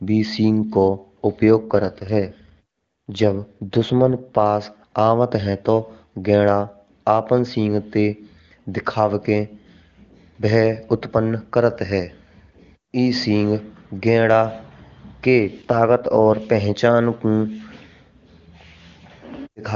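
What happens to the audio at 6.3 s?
Nothing goes wrong at 6.3 s: the speech passes through intact there, carried cleanly by the AMR wideband (HD Voice) codec at its top rate of 23.85 kbit/s.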